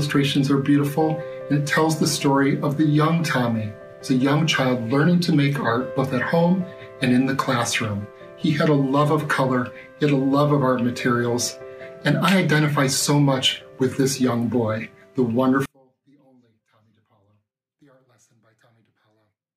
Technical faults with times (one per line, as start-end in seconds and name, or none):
15.66-19.56 one channel inverted